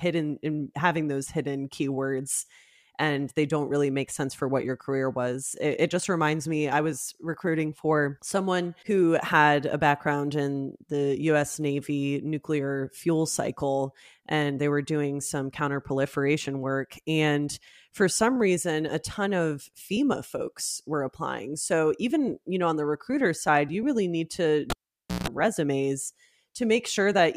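Speech, with a cable pulled and plugged in just after "you really need to": a pop at 24.70 s, 0.53 s of near silence, 0.16 s of 60 Hz mains buzz as the plug tip touches, then a pop at 25.28 s. The waveform shows spikes bracketing a flat gap, and the spectrogram shows vertical lines and stacked 60 Hz harmonic stripes.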